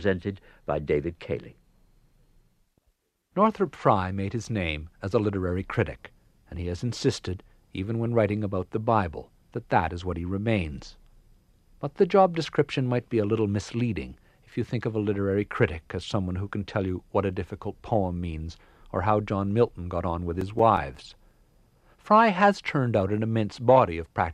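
A speech recording carrying CD scratch ticks from 20.23 to 21.66 s, starting just after "got on": a run of nine short ticks, the longest only a few milliseconds, spaced roughly six a second. A scratch spoils more data than error correction can rebuild once per disc revolution, so the player conceals the damaged samples. The evenly spaced repetition, locked to rotation speed, is what separates these from random vinyl crackle or irregular buffer-underrun clicks.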